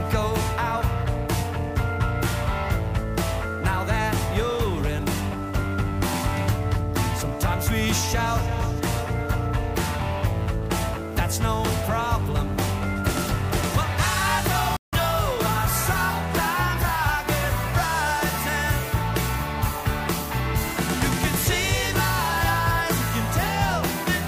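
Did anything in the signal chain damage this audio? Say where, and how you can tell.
Yes. At the playback stage, the audio cuts to silence from 14.77 s to 14.93 s. It's a playback stall of about 160 ms. The sound stops mid-flow, then resumes. The player likely ran out of buffered data or had its output thread blocked.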